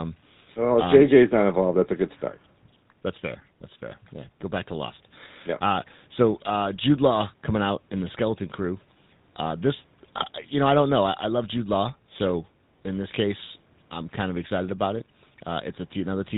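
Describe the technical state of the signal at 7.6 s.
At 7.6 s the speech sounds buzzy and gravelly with nothing above 4 kHz, as it does throughout: GSM full-rate codec damage, which fits 13 kbps pulse-excited vocal-tract coding.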